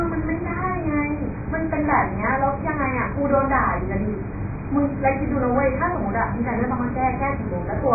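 A lossy encoder starved of bits, likely AAC compression of the AAC-LC kind at a rate that points to around 12 kbps, removes everything above 2.5 kHz for the whole clip. The speech sounds dull and muffled, heavily smeared, with a warbling, fizzy texture on sibilants.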